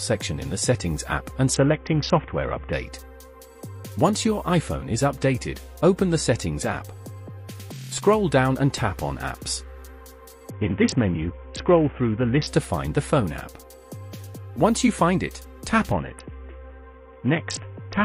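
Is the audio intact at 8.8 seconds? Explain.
Yes, the audio is intact at 8.8 seconds, with no dropout, click, distortion or other fault audible at that point.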